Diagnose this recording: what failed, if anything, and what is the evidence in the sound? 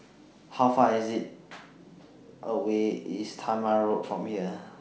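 Nothing failed; no fault can be heard in this speech.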